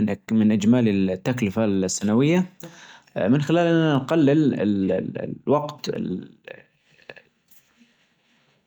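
Speech clip with periodic USB or driver dropouts from 1.95 to 7.95 s: roughly four silent gaps of about 2 ms, every 2.0 s, heard as ticks, seen as thin vertical lines on a spectrogram and brief flat breaks in the waveform.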